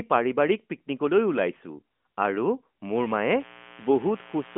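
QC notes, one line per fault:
2.95 to 4.58 s, mains buzz: a steady, raspy buzz kicks in and runs to the end, about 20 dB under the speech. Sharp switching spikes twice per 60 Hz cycle throw harmonics right up through the narrow mobile-phone band.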